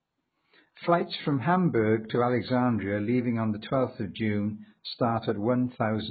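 It's a speech recording, and the whole thing sounds dull and smeared, with nothing above about 4.6 kHz and a warbly, fizzy edge on sibilants, which is most likely heavy AAC compression at a very low bitrate, somewhere around 12 kbps.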